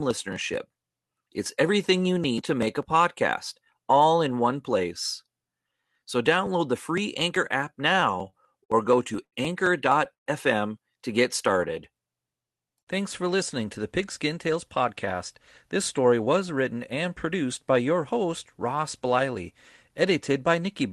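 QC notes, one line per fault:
7.93 to 9.34 s, repeated stalls (stutter): nine short gaps, the longest 80 ms, are bridged by stretching the last sound. Delivery drags and stutters, nothing lost.
10.13 s to 10.28 s, call audio freeze: about 130 ms gap, mostly silent after a brief fading continuation. Likely a delayed packet burst emptying the buffer.
11.53 to 11.74 s, jitter buffer slow-down: just after "to get", repeated pitch periods add 38 ms. Sound runs at 86% speed, same pitch, drawn out.
13.66 to 16.65 s, jitter buffer speed-up: trimmed pitch periods remove roughly 150 ms before "and produced by your". Sound runs about 5% fast, slightly hurried, unchanged pitch.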